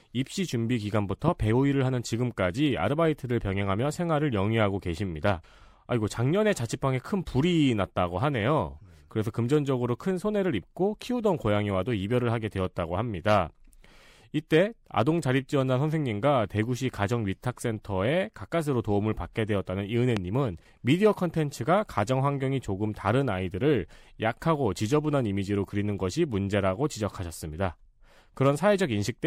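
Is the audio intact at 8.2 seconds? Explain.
Yes, the speech at 8.2 seconds is intact, with no dropout, click, distortion or other fault at that moment.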